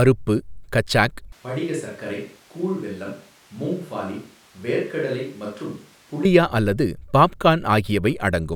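The close microphone's feed likely dropped out at 1.32 s, forcing a switch to a distant microphone until 6.25 s. The speech abruptly turns roomy and hollow, thinner in the bass, about 10 dB quieter, with background noise rising to roughly 25 dB below it.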